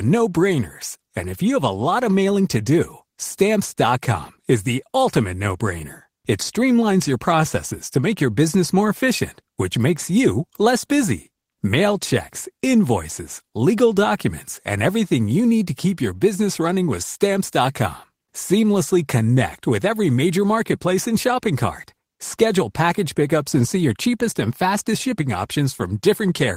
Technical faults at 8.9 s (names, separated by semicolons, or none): none